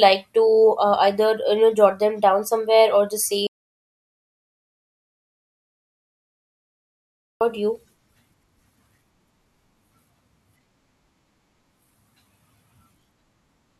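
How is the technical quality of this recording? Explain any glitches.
The recording has one significant glitch. An audio dropout to silence runs from 3.47 to 7.41 s. The speech stops abruptly and returns mid-flow, leaving about 3.9 s of silence with no room tone. The likely cause is a lost input, such as a disconnected device, failed link or accidental mute, while the recorder kept writing silence. Whatever was spoken in that gap is missing.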